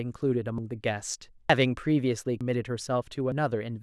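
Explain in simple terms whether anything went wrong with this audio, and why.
Something did go wrong: the speech skips forward four times, at 0.58, 1.50, 2.41 and 3.32 seconds. At each point roughly a tenth of a second just vanishes, and the sound on either side is butted together with no gap. The steady rhythm of the skips points to audio missing between chunks. The recorder likely handled the sound in one-second pieces and dropped a little each time it switched from one piece to the next.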